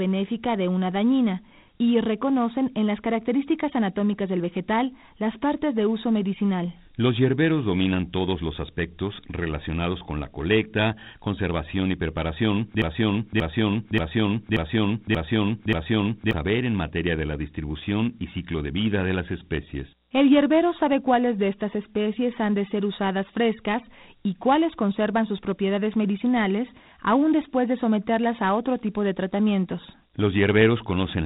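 Throughout the recording the speech has passed through Dialogic VOX ADPCM, the low-rate telephony format that stores each sample as a coarse 4-bit step from the last. Those crude steps leave a plainly audible gritty hiss that rides along with the speech, and the band is cut off near 3.9 kHz, which fits 8,000 samples a second and about 32 kbps. Consonants sound dull and grainy, with no air above that cut-off.

From 12.82 s to 16.33 s there is a broken-record loop, most likely caused by playback or the stream stalling and resending the last fragment it held. A piece about 0.58 s long repeats exactly, back to back, six times, giving a stuttering, machine-like repetition instead of forward movement. Whatever should have been heard during those three and a half seconds is lost, and the speech resumes abruptly once the loop releases.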